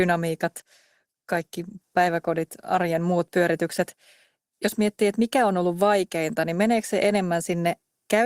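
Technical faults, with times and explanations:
0.39–3.63 s, call bitrate drop: speech turns rough and duller, lowest for about 2.4 s, fitting an encoder squeezed from 32 to 17 kbps.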